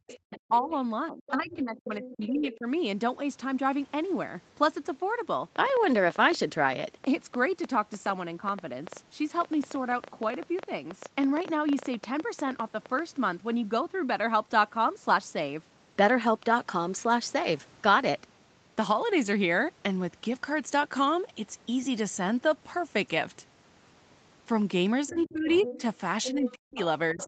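It's a speech recording over a call, with the band topping out at 8 kHz, and it has three problems. From 0.0 to 2.66 s and again from 25.09 s to the end, there's speech suppressed in double talk: the voice dips by up to about 40 dB, for around a second and a half in total in the first stretch, likely because the echo canceller ducked everything while both sides talked. Over nearly the same stretches, 0.1 to 2.56 s and 25.08 s onward, the other side's voice is leaking through at roughly 15 dB below the talker, likely since the echo canceller didn't fully scrub the loudspeaker pickup. Between 5.56 and 13.0 s there's a train of clicks, roughly 70 of them, unevenly spaced at about eight per second and peaking around 5 dB above the speech. It sounds like interference or a faulty connection.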